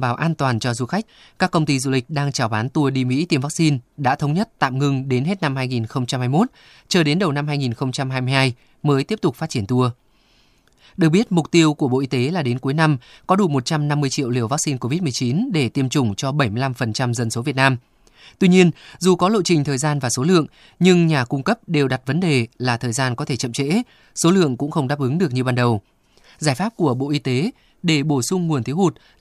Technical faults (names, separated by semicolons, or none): none